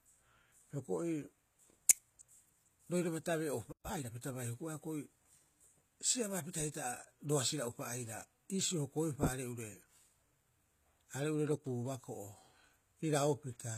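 Throughout, the clip carries plainly audible codec damage, most likely from HE-AAC compression at a bitrate around 20 kbps. This codec transmits only the lower spectrum and synthesises the treble by copying lower bands upward under a coarse envelope, so the upper range is a reconstruction rather than the original. Nothing is present above 14.9 kHz, and the rebuilt treble's harmonics don't align with those below the crossover, which makes the upper register sound artificial.

From 3.72 to 3.86 s the audio stops in mid-flow and falls silent for just over a tenth of a second. This is a playback stall: the player likely ran short of data, or its processing thread was held up, and produced no output until it recovered. The silence is an abrupt break in continuous speech rather than a natural pause.

Immediately afterwards, from 3.86 to 4.10 s, comes time-compressed catch-up. To shed the backlog built up during the stall, the player removed small slices of audio and cross-faded the remaining pieces together. 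That runs the speech at 1.5 times normal speed while keeping its pitch, so this short stretch sounds hurried until normal pacing returns just before "pita bai".

From 11.55 to 11.66 s the level falls abruptly by about 6 dB and then recovers, with the character of the sound unchanged. That drop is what one channel drops out produces when the lost channel held the same material as the other. Here one stereo channel was likely lost for about a tenth of a second, so the combined mono signal briefly carried only half its contribution.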